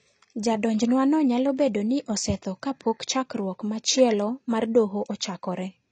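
From start to finish the speech sounds dull and smeared, with nothing above about 8.6 kHz, and sibilants and held vowels carry a plainly audible warbling, fizzy texture. This is most likely AAC compression, of the AAC-LC kind, at a low bitrate, which fits something around 24 kbps. Starved of bits, the encoder has lowered its cut-off and quantised the remaining frequency bands coarsely, leaving gaps in the spectrum that shift from frame to frame.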